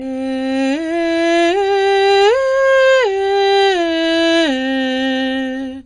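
The music was likely transcoded between lossy codecs, passing through several encoders in turn, which fits an HE-AAC, WMA and low-bitrate AAC-LC chain. Throughout, nothing sounds above 9.5 kHz, and the different encoders' artefacts are heard layered together.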